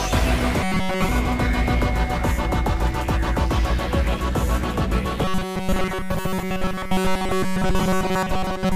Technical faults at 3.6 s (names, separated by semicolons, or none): none